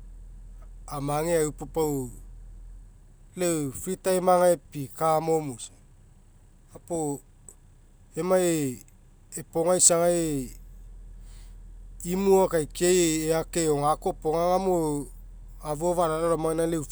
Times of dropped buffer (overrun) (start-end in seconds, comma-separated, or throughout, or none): none